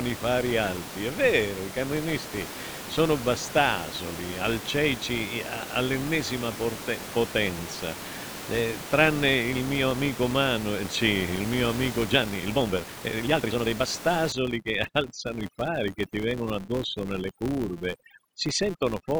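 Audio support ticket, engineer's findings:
Filter restarted on every block, whole clip: steady tick/buzz around 172 Hz riding the speech level. Filter state gets wiped each block, so every block starts from silence with a small transient. The rate fits a 256-sample buffer. Check the block-processing filter.

Time-stretched section, 12.02 to 13.88 s, right after "eh sì il mio": pace jumps to about double (1.98x) while pitch holds, so it sounds rushed. Likely a fit-to-length stretch squeezing the audio by dropping short chunks.

Overdone noise removal, 14.32 s through to the end: background drops and breaks up into twinkly specks. The denoiser is cranked too hard, killing bands near its noise estimate and taking quiet speech detail with them. Room noise sits about 12 dB below the speech.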